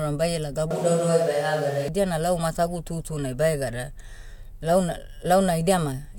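Speech recording with a switch to a distant microphone from 0.71 to 1.88 s, just before "na lau matagu tutunai". The sound turns suddenly hollow, thin and roomy, with room noise roughly 25 dB below the speech, at much the same level, likely because the close mic dropped out.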